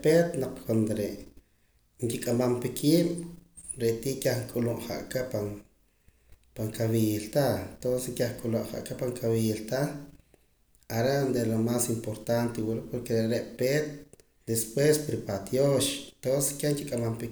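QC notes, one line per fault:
No faults to log in this speech recording. Nothing heard in it calls for a QC entry.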